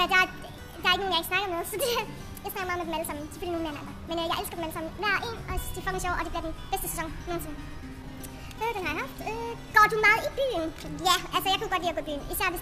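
Throughout, the audio shows a wrong sample rate. It runs 1.5 times fast and about 7 semitones high, which fits 32 kHz material played back at 48 kHz.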